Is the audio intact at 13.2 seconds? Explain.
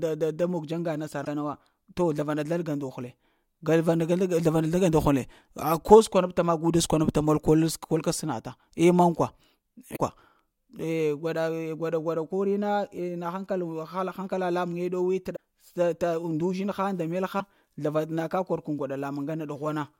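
Yes, the audio is intact at 13.2 seconds, with no fault heard at that point.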